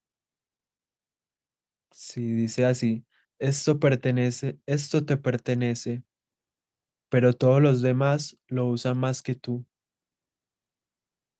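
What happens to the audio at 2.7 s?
At 2.7 s you're in the middle of an automatic gain rise, from 2.13 to 3.78 s: the AGC judged the speech too quiet and eased its gain up by about 3 dB, so voice and background swell together.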